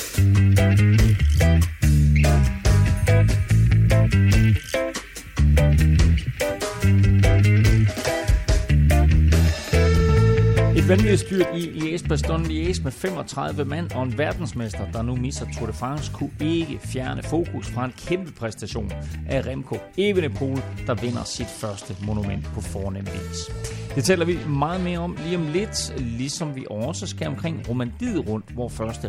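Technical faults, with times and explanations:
No technical faults can be heard anywhere in the signal.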